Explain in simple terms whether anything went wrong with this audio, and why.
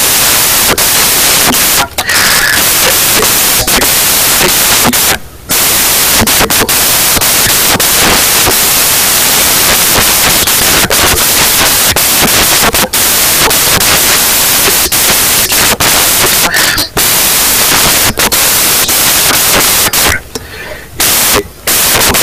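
The whole clip plays as loud hiss because of samples built from the wrong bytes: each sample's bytes were misassembled, so the speech becomes noise.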